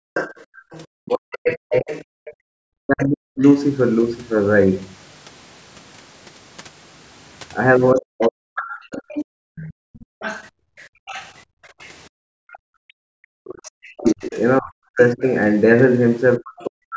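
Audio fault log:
0.00–0.58 s, 2.19–2.58 s and 9.25–12.51 s: background gated by the echo canceller. The room sound drops away, by about 40 dB at its deepest, then returns. The drops are brief in the first two spans and last around two seconds in the third. The canceller clamps the microphone while the loudspeaker plays.
0.14–3.57 s and 8.21–15.33 s: other side's voice leaking through. A second voice sits under the main talker. It is about 10 dB down in the first span and about 15 dB down in the second. The likely cause is loudspeaker sound that the echo canceller failed to remove from the microphone.
0.86–3.41 s, 7.92–8.99 s and 12.84–16.96 s: speech suppressed in double talk. The talker's own speech dips or cuts out in pieces, by as much as roughly 40 dB. Across the spans this adds up to well over a second, then about a second, then around three seconds. Both sides likely talked at once, and the canceller turned everything down.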